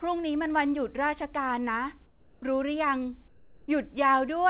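From 2.06 to 2.42 s and again from 3.28 to 3.68 s, the background gives way to comfort noise, likely from discontinuous transmission: a steady, featureless hiss about 2 to 3 dB quieter, rather than the true silence a noise gate would leave.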